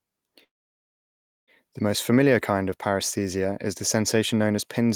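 At 0.43 s the speech stops and a call audio freeze begins, lasting until 1.51 s. The last sound trails off briefly, then roughly a second of silence follows before the speech resumes exactly where it left off. The likely cause is packets held up in transit, draining the jitter buffer. Unlike a dropout, nothing is lost: the gap is inserted, so everything after it arrives about 1.04 s later.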